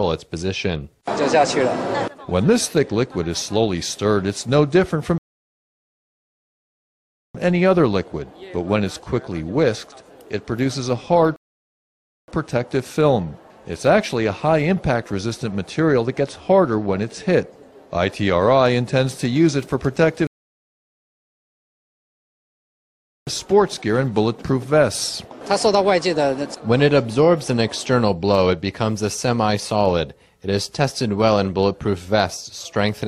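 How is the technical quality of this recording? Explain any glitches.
The recording has three rebuffering stalls: at 5.18 to 7.35 s, 11.36 to 12.28 s, and 20.27 to 23.27 s. Playback ran out of downloaded audio and waited. Sound drops to silence, then resumes exactly where it stopped, adding about 2.2, 0.9 and 3.0 s.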